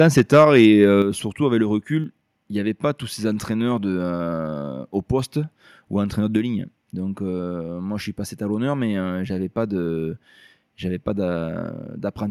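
From the start to 0.65 s the speech peaks are flattened against the converter's limit, giving the loudest syllables a harsh, crackling edge. This is microphone overload, likely from the input volume being set high enough that peaks ran about 4 dB past what the converter could represent, so their tops were cut off. Around 2 percent of the samples in that stretch are clipped.

At 1.02 s, just before "surtout avec le", the whole signal drops in one step by about 6 dB, voice and background together, with no fade. This is the microphone volume being stepped down, likely by the call software reacting to the overloaded peaks just before and cutting the device's input gain in a single move. From that point the level sits noticeably lower than in the opening second.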